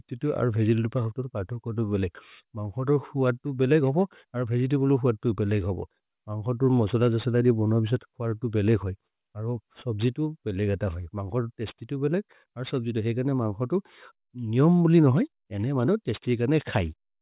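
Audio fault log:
throughout aliasing: sample rate dropped to 8 kHz without an anti-alias filter, so content above 4 kHz folds back as gritty, metallic sibilants at about 30 dB down.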